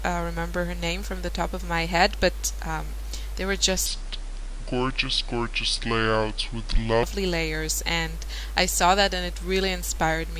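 From 3.86 to 7.03 s the audio shows a wrong sample rate fault. Playback runs at two-thirds speed and drops about 7 semitones, so the sound turns slow and low. This fits 48 kHz material played at 32 kHz with no rate conversion.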